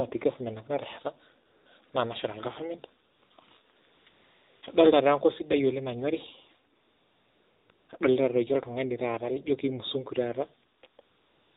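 Speech, passed through the AMR narrowband mobile codec. Nothing above 4 kHz survives, so the sound is dull and boxy. The codec builds each 20 ms frame from a vocal-tract model fed by a few pulses. Here that gives a plainly buzzy, synthetic edge, which points to a low rate near 7.4 kbps. AMR comfort noise also appears eleven times, from 1.46 s to the very end. In each case the phone treated the talker as silent and stopped sending speech frames. The receiver then filled the gap with smooth synthetic noise built from a rough level and spectrum. The real background switches out and this flat hiss switches in. The gaps run from 20 ms up to 940 ms. The longest is 6.76 to 7.70 s. Others cluster near 3.1 to 4.6 s and 10.8 s to the end.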